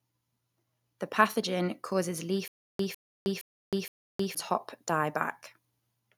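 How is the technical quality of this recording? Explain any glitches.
There's one real glitch here. From 2.48 to 4.35 s there's a stutter with silent gaps: a 152 ms speech fragment repeats four times, each followed by about 315 ms of dead silence, likely a stalled stream replaying its last buffer, and the missing audio is lost.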